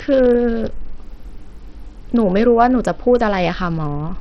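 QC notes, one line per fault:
Throughout, Bluetooth SBC compression, likely: nothing comes through above about 11.5 kHz, the remaining treble flickers, and a gritty haze with some aliasing clings to the speech. It points to a starved bit pool, around 64 kbps, leaving the upper sub-bands with almost no bits.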